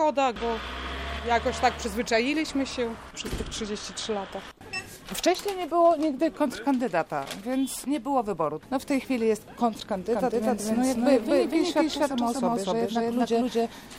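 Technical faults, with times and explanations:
10.13 s to the end: doubled audio track. The same audio is likely being captured a second time by a slower path, or an edit holds two out-of-step copies. From here a full-band copy, about as loud as the original, trails by about 300 ms. It cuts in abruptly, with no decay or room colour.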